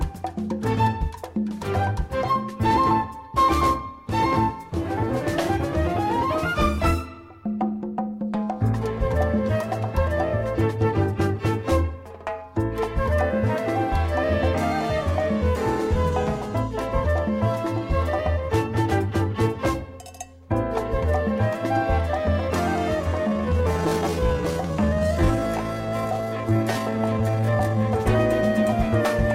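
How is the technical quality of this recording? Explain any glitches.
The recording has one glitch, a time-stretched section from 23.23 to 27.85 s. Processing has likely slowed this stretch to about 0.66 times its original speed while holding pitch steady by repeating short slices. The pace drags abruptly, with the pitch unchanged.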